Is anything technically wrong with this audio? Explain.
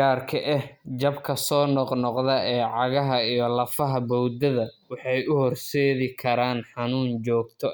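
No, nothing technically wrong stood out on listening to this speech recording.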